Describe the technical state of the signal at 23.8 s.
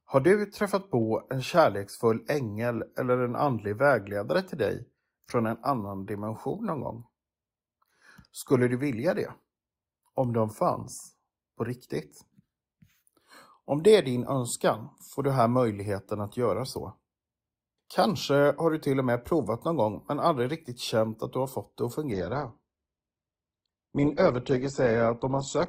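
At 23.8 s the adaptive stream has switched to a lower bitrate, from 22.12 s, just after "har fått det att", to the end at 25.68 s. A slowed connection made the player fetch a leaner encoding, consistent with Opus falling from 64 to 12 kbit/s. The speech abruptly loses everything above 8.1 kHz and turns dull and artefact-laden, with no gap.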